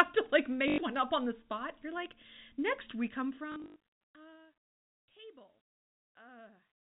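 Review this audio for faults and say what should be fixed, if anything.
Packet loss with last packet repeated occurs twice. At 0.68 to 0.78 s, between "to like" and "one up on the", about 100 ms of audio is missing. At 3.52 to 3.76 s, between "like next we come" and "uh table", 180 ms is lost in bursts spread over 320 ms. The longest run is 80 ms. The receiver replays the last packet to fill each gap. The repeats buzz and sound robotic. The spacing fits 20 ms packets, which gives a buzz near 50 Hz. To prevent this, add a jitter buffer and real packet loss concealment, such as pitch-synchronous waveform repetition with fading.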